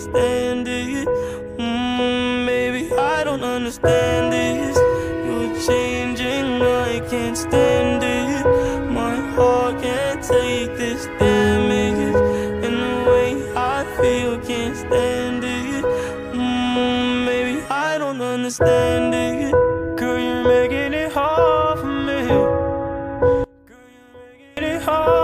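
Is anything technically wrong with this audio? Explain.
Yes. From 23.44 to 24.57 s the sound suddenly drops by about 26 dB, collapsing to a faint remnant before returning. This is likely one channel inverted: with one side's polarity reversed, everything common to both channels cancels in the mono sum, leaving only their slight difference.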